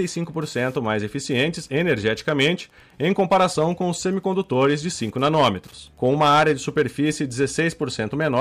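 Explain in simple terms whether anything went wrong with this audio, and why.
Two things went wrong. Throughout the speech there is Wi-Fi interference: a nearby radio leaks into the audio as a faint, steady ticking about ten times a second. It keeps its regular beat, unlike random crackle.

There is also hard clipping, where the speech gets too loud for the equipment and its peaks are chopped flat. That turns it harsh and fuzzy at 3.04 to 3.66 s, 5.23 to 5.48 s and 6.05 to 7.67 s, and adds crackle on the peaks at 1.38 to 2.50 s, 4.61 to 4.74 s and 8.21 to 8.41 s. The distortion rises and falls with the loudness of the speech, while the ticking does not.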